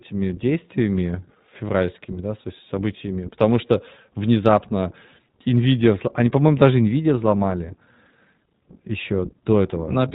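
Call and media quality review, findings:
iLBC codec throughout the whole clip: speech band-limited, nothing above 4 kHz, plainly rough and synthetic texture. Narrowband codec coding each frame's excitation independently; sound fits 20 ms frames at 15.2 kbps. Worth checking endpoint codec negotiation.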